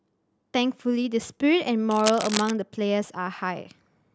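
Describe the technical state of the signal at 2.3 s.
A worn cable or connector was likely being moved, its contact resistance jumping rapidly, producing cable scratch noise from 1.91 to 2.51 s. At 2.3 s dense, uneven bursts of scratching and rustling sit over the speech, only slightly quieter than it.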